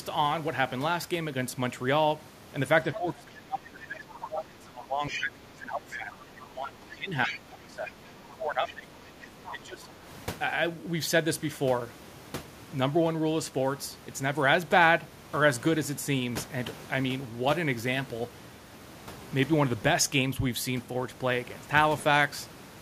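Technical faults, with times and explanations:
2.92–8.92 s and 9.28–10.04 s, speech suppressed in double talk: The echo canceller likely took this talker for loudspeaker echo while the far side was also playing, and turned both down. The speech sinks for about 5 s of the first span, by up to around 20 dB, and for about 0.7 s of the second, by up to around 15 dB.
2.94–2.98 s, 4.22–4.26 s, 5.07–5.22 s, 7.25–7.39 s and 8.68–9.49 s, other side's voice leaking through: The echo canceller likely left part of the loudspeaker playback in the microphone signal, so short scraps of a second voice come through, about 10 to 20 dB below the main speech.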